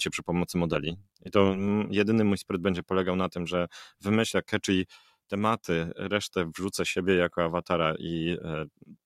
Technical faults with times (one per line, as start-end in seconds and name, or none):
0.72-1.69 overlap-add ripple